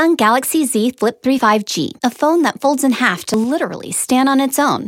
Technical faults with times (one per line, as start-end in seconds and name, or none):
1.39 audio missing between chunks
3.34 audio missing between chunks